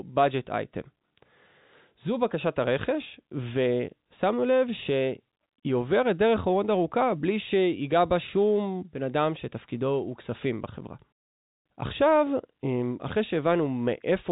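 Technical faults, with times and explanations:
No faults found; the speech sits in the normal G.711 telephone band, with nothing above 3.8 kHz.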